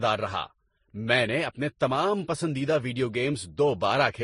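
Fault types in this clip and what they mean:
Transcoding between lossy codecs: the speech was likely encoded at a low bitrate and then re-encoded twice. Each stage compressed the previous stage's artefacts and added its own, so different artefacts are heard together. Nothing remains above 10.5 kHz. This fits a Vorbis, MP3, Vorbis chain near 36 to 45 kbit/s.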